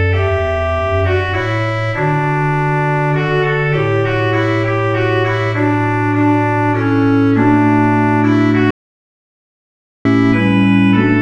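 At 8.71 s the sound drops out to dead silence, with no room tone at all, and comes back at 10.05 s, so about 1.35 s is simply gone. That's an audio dropout to silence, likely a lost input while the recorder kept writing silence.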